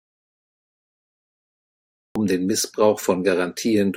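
A speech clip, and the first stretch is dead: from the very start to about 2.16 s there's an audio dropout to silence, already under way when the file begins. It's plain silence, with no room tone or hiss at all, and then the speech comes in abruptly mid-flow. That pattern most likely means the input was lost, through a disconnected mic, a dropped link or a mute left on, while the recorder kept writing silence. Whatever came before the return is simply gone.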